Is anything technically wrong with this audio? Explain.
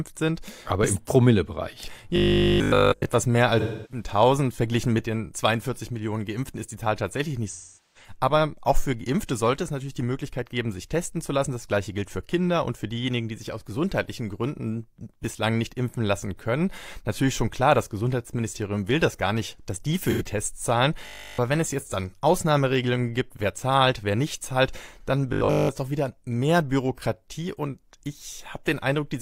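Yes. The speech has two kinds of technical fault, each occurring three times.

Robotic sound from repeated short buffers occurs at 2.16–3.06 s, at 21.07–21.39 s (just before "wenn es jetzt dann") and at 25.33–25.69 s (between "wer nicht zahlt dann" and "das doch wieder mehr"). The speech turns into a rigid, metallic buzz locked at 50 Hz, which points to a 20 ms stretch being replayed over and over, likely because fresh audio arrived too slowly. In the first two spans almost everything is repeated. In the last, most of it is. The fixed, steady pitch distinguishes it from the concealment fault.

AAC frame loss with concealment appears at 3.60–4.04 s, 7.48–8.12 s and 20.04–20.22 s (right after "gar nicht dass die"), wiping out about 299 ms, 427 ms and 85 ms of audio. These spans fit the loss of seven, ten and two frames. The decoder patches each gap from the last good spectrum, so these spots sound smeared, noisy or phasey rather than buzzing. 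They have no steady imposed pitch, which separates them from the repeated-buffer sections.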